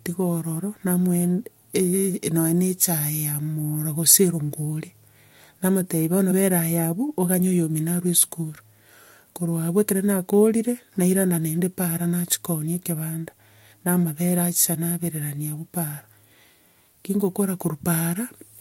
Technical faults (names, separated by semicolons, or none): compressed frames skipped